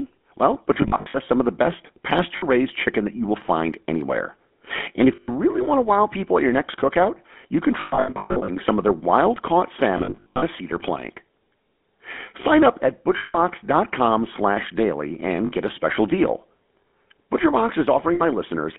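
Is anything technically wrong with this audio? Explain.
Yes. The whole clip passes through the GSM full-rate codec at 13 kbps, which models the vocal tract and drives it with a sparse, regularly spaced pulse excitation. With the line band limited to 200 Hz to 3.5 kHz, the speech sounds plainly buzzy and gravelly.

Lost GSM frames occur eight times, and each gap is filled by repeating the last good frame, so the sound turns into a rough, metallic ring. At 0.74 to 1.17 s, about 200 ms of frames are missing, scattered across 0.4 s. At 2.36 to 2.44 s, between "some of the best" and "raised chicken that you", 60 ms are lost. At 5.16 to 5.29 s, 120 ms are lost. At 7.8 to 8.5 s, 540 ms are lost, scattered across 0.68 s, with the longest run about a tenth of a second. At 9.98 to 10.43 s, between "of their wild caught" and "a cedar plank", 300 ms are lost across 0.44 s. At 13.18 to 13.38 s, just after "up at", 160 ms are lost. 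At 15.46 to 15.52 s, 60 ms are lost, and at 18.14 to 18.21 s, another 60 ms are lost.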